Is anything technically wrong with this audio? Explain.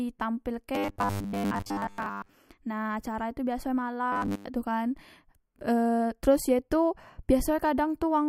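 Yes. From 0.75 to 2.33 s, just before "nah acara tu biasok", and again from 4.12 to 4.45 s, between "acara tu biasok e" and "tu kan", the speech turns into a rigid metallic buzz fixed at 100 Hz that only loosely tracks the words. This is robotic sound from repeated short buffers, likely caused by audio arriving too slowly, so each roughly 10 ms slice is replayed while most of the real signal is skipped.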